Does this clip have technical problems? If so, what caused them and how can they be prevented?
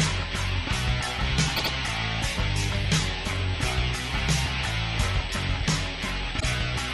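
Yes. A steady USB whine sits at 8 kHz throughout, around 35 dB below the signal. It comes from current drawn in the bus's 125 microsecond microframes leaking into the audio. An isolator or separately powered interface prevents it.

Repeated frames cause stutters. From 1.56 to 1.71 s, a 78.4 ms block plays twice more. From 6.39 to 6.44 s, a 52.2 ms block repeats once. Duplicated compressed frames add about 209 ms in total. Checking frame sequence during writing or streaming prevents this.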